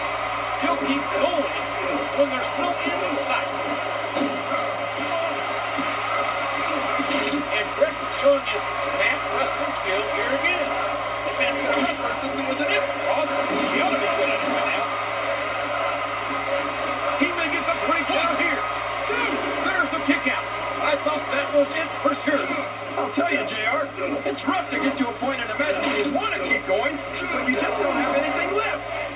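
No technical faults are audible anywhere in this audio.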